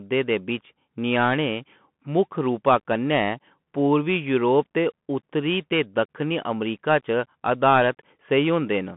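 From start to finish the speech runs through a Bluetooth CVSD headset codec, the one-bit delta scheme whose rate fits 64 kbps. The band sits at about 150 Hz to 3.4 kHz with nothing above 3.7 kHz, so it's dull and boxy, with scratchy s sounds and a grainy hiss underneath.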